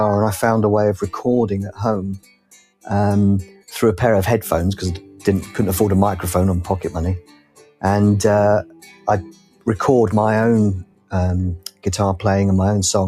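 Throughout the clip a noise suppressor tuned for speech is applied to this sound, treating sustained content and decays as noise. Its gain rises and falls by about 10 dB as it decides what to keep, so transients come through while steady parts and tails are pulled down. The result is a pumping, unstable level and a thinned-out body wherever the signal holds rather than strikes.

On top of that constant action, the suppressor cuts specific passages harder: 2.15–2.86 s (about 18 dB), 3.46–3.68 s (about 13 dB), 5.01–5.24 s (about 7 dB), 7.20–7.83 s (about 18 dB), 8.64–9.07 s (about 13 dB), 9.24–9.67 s (about 18 dB), 10.84–11.13 s (about 18 dB) and 11.63–11.86 s (about 18 dB). In each, the sustained sound sinks or its decay is chopped short for a fraction of a second, heard as a sudden dip.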